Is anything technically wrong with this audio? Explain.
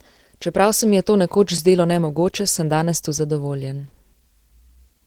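Yes, two things. Throughout, the speech has the muffled, hoarse and grainy edge of low-rate Opus compression, likely the encoder's hybrid speech mode at a bitrate around 16 kbps. There isn't enough data to render detail cleanly, so the codec damage is plainly audible.

At 1.57 s there's a block of digital silence, an 8 ms stretch where the sound drops out. The sound cuts out and back with no fade, so that abrupt edge is heard as a quick tick or dip.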